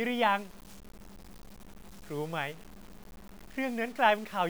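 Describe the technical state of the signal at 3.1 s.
At 3.1 s, as everywhere in this speech, there's a grainy distortion that shifts with the sound, sitting only around 25 dB below it. That's likely low bit depth without dither: seven-bit truncation with no dither, so the error tracks the signal and quiet parts turn gritty.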